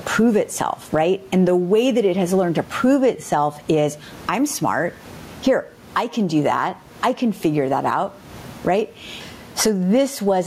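Throughout, gain pumping swings the gain around 20 dB, ducking it under loud speech, likely a fast limiter fighting excessive gain.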